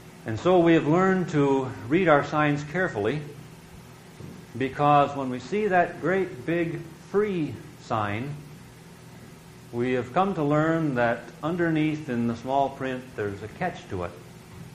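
No technical faults can be heard anywhere in it.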